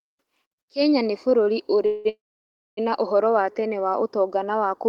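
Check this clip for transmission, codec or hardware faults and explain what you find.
Three transmission faults stand out, all gaps inserted into the speech rather than lost material.

From 1.29 to 1.33 s there is a short stall from a late packet: the jitter buffer emptied, so about 16 ms of the last sound is held with a slight buzz or dip, then the speech resumes intact.

Two call audio freezes follow, at 1.86–2.07 s and 2.09–2.79 s, likely from packets held up in transit draining the jitter buffer. The first stretches the last sound into a fading buzz or hiss for about 190 ms. The second extends it for about 680 ms, most of which (about 600 ms) is silence, before the speech picks up where it stopped.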